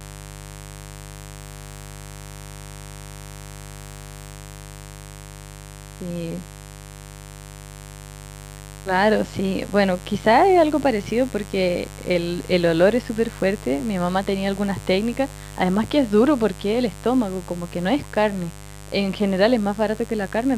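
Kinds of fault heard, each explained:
Mains buzz: A raspy 50 Hz buzz runs under the speech for the whole clip, sitting roughly 20 dB below it. Sharp switching spikes from the supply, twice every mains cycle, spread harmonics up into the kilohertz range, which is what gives it that edge.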